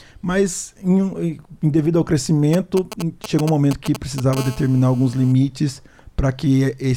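From 2.53 to 4.35 s, a 2G handset close to the recording chain is exchanging signalling with its network, sending short clusters of radio bursts rather than a continuous transmission. The audio circuitry rectifies those bursts and turns them into audible GSM signalling bursts: a galloping dit-dit-dit of brief buzzes pulsing at 217 Hz. They sit roughly 10 dB below the wanted sound.

At 4.37 s the phone moves into a call and transmits its bursts continuously at 217 per second until 5.32 s. The circuit keeps demodulating the pulses, so the stuttering pattern becomes a steady GSM phone buzz. It is a hard, raspy 217 Hz tone packed with harmonics that has nothing to do with the sound underneath. It sits about 18 dB below the sound, quieter than the earlier bursts but unbroken for its whole span.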